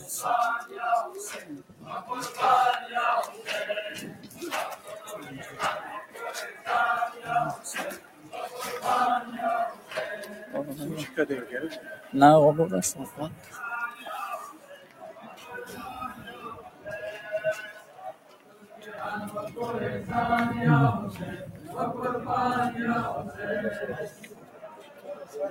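Right from the start, a speech-tuned noise suppressor is running on material that isn't speech. It reads sustained tones and ambience as noise, so the level pumps with a swing of something like 15 dB, attacks getting through while tails sink.

You hear the sound cut by the noise suppressor at 1.42 to 1.86 s (about 11 dB down), 4.14 to 4.88 s (about 7 dB), 6.06 to 6.66 s (about 9 dB), 7.57 to 8.33 s (about 10 dB), 9.74 to 12.13 s (about 9 dB), 13.1 to 18.87 s (about 11 dB), and from 24.09 s to the end (about 11 dB). Each time, held or fading parts get pulled under.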